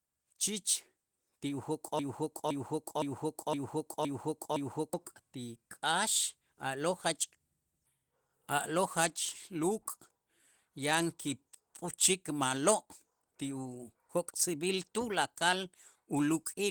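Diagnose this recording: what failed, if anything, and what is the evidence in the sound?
Opus voice compression runs through the whole speech clip at the codec stage. Its damage is plainly audible: a coarse, slightly hoarse and robotic texture from the linear-prediction core and an upper band reaching up to about 20.1 kHz, which fits hybrid mode at around 16 kbps.

A broken-record loop runs from 1.99 to 4.94 s, ending just before "ti k'aax a'lo'". A 0.51 s fragment repeats exactly, back to back, six times, and the audio due in that span is lost. The likely cause is a stalled player or stream buffer that kept resending its last chunk.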